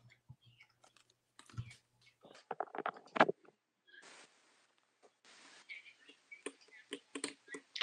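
At 2.35 s the recording input was likely switched to a poorer device, which stays in place to the end. The new path passes a narrower band, with nothing above about 9.2 kHz, so the sound turns duller and loses its top-end air from that moment. The change is seamless, with no gap at the switch and no real jump in level, and a faint new background noise sits far beneath the signal.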